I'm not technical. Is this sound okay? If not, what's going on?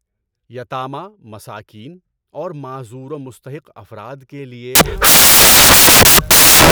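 No. From 4.75 s to the end, the player assembled samples built from the wrong bytes, so the speech turns into loud hiss.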